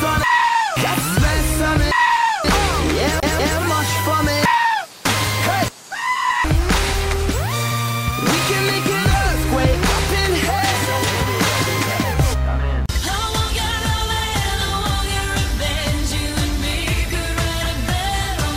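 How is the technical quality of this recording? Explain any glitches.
The recording has one glitch, from 3.20 to 3.58 s: the CD is stuck on one turn. A scratch knocks the laser back a track at the same point each revolution, so a 190 ms slice of sound plays twice, with a brief mute at each jump, giving a quick, even stutter.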